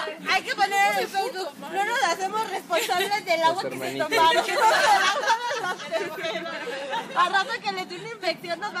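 From 4.02 to 5.33 s and again from 7.19 to 7.37 s there is hard clipping: peaks are driven about 4 dB, then about 3 dB, past the limit and sliced flat, giving crackly grit. Waveforms show squared-off tops, spectrograms bright vertical smears of high harmonics.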